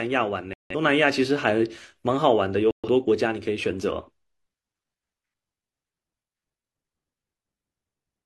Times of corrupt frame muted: 0.53-0.75, 2.71-2.88

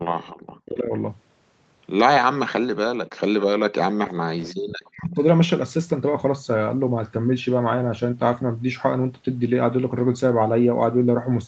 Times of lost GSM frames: none

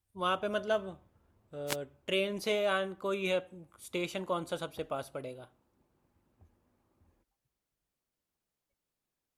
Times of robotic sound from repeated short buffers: none

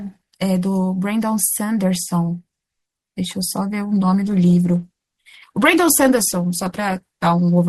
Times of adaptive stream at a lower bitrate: 3.85-7.68

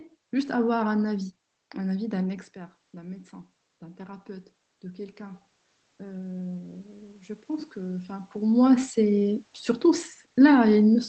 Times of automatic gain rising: 1.96-6.85

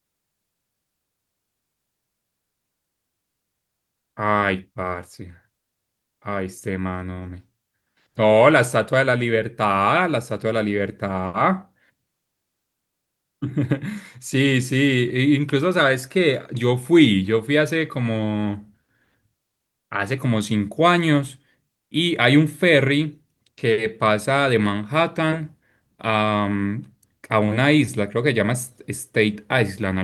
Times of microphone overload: none

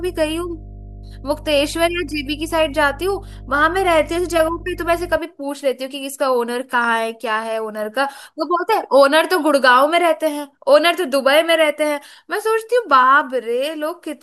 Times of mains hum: 0.00-5.18

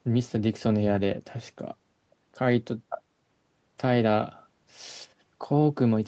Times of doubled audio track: none

